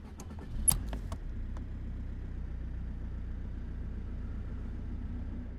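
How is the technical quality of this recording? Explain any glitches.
The recording has two glitches, both in its first few seconds.

From 0.68 to 0.70 s there is DAB burbling. Weak reception let bit errors slip past the error correction into the MP2 audio data, at a rate of around a tenth of a percent, and the damage points to five frames. Corrupted samples and scale factors make individual sub-bands jump in level, so the sound briefly breaks into short blips of noise.

From 0.93 to 2.33 s the playback rate jumps by 6.24 percent and then snaps back, most likely a drift correction step, where clock-matching software changes rate in one move to refill or drain its buffer. Speed and pitch rise together by 105 cents, roughly a semitone, so the sound is suddenly detuned and hurried for about 1.4 seconds before returning to its original pitch and pace.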